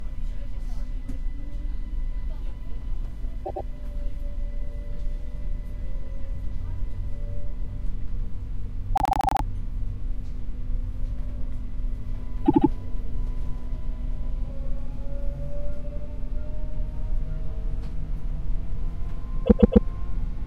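Repeated frames stutter the sound at 3.44, 8.95, 12.45 and 19.45 s. A short run of compressed frames plays again each time. A 105 ms block repeats twice, a 78 ms block six times and then three times, and a 131 ms block three times. Each stutter lengthens the audio.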